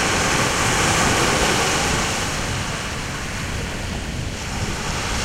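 No technical faults detected anywhere in the recording; nothing to flag.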